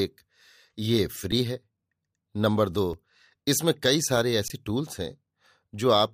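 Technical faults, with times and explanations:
1.32 s, 2.93 s and 4.48 to 4.50 s, underrun with held sample: the output buffer ran dry and the converter froze on its last value until data arrived, so the waveform sits flat at a fixed level. The sound halts with barely a click, and roughly as much live audio as the gap was lost. The first two gaps last 5 ms and the third 20 ms.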